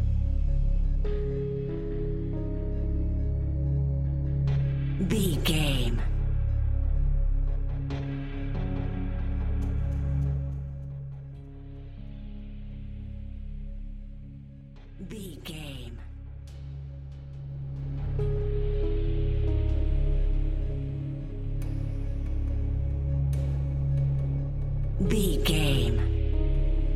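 From 10.18 to 11.04 s the level drops by roughly 15 dB with zipper noise, and from 17.48 to 18.08 s it climbs back by about the same amount with the same fault. Each gain move is applied in unsmoothed steps, around fifty a second, so a fine ticking buzz rides on the sound during the change. A waveform shows a staircase envelope, and a spectrogram shows faint, evenly spaced vertical broadband lines.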